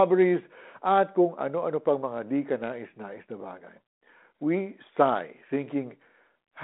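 No technical faults can be heard in this recording.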